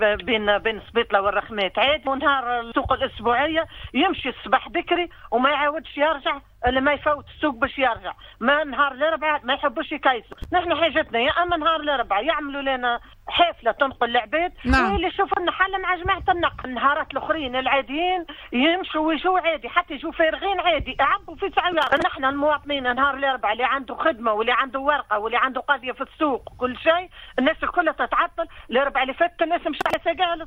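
Processor overload crackle appears three times: 10.33 to 10.45 s, 21.73 to 22.02 s, and 29.81 to 29.94 s. In each burst the processor falls behind and misses a long run of buffer deadlines in a row. Each missed slot is skipped, leaving a hard-edged gap, and the gap spacing fits buffers of about 10 ms. Unlike a single dropout click, the gaps pile up into a gritty tearing crackle that rides on the sound and stops once the load clears.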